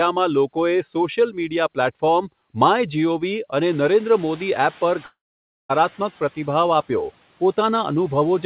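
At around 3.5 s the room noise jumps sharply, and the noise suppressor falls behind it. Its noise estimate still reflects the quieter background, so from 3.68 s the louder noise passes through with little reduction. The estimate takes about 2.38 s to catch up, and by 6.05 s the noise has sunk by about 6 dB, a gradual settling rather than a clean step. The band-limited call sound, with nothing above 4 kHz, stays constant throughout.

Within that stretch, at 5.06 s, the audio stream stops arriving, which is likely a long network dropout. For about 0.64 s the receiver has nothing to play, so it extends the last sound as a fading buzz or hiss, leaving about 0.54 s of near-silence within that time. The sound resumes at 5.71 s at "પ્રતિભાવ આપ્યો", but the missing portion never returns, leaving a gap.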